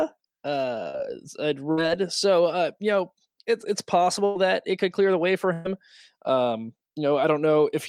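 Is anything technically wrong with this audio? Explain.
Yes, the speech has four gaps from lost network packets.

Short concealed packet loss at 0.89 to 0.96 s: about 40 ms never arrived in time, so the decoder extended the preceding sound across the hole, leaving a brief smear.

Burst of packet loss at 1.72 to 1.79 s, just before "so uh you know"; at 4.25 to 4.37 s, between "you know it's it's" and "that it could clear"; and at 5.53 to 5.67 s, after "clear the way for". Consecutive packets went missing, about 60, 100 and 120 ms respectively. Each gap is filled by a stretched, fading continuation of the last sound, with no silence in the last one, before the speech resumes with that stretch gone.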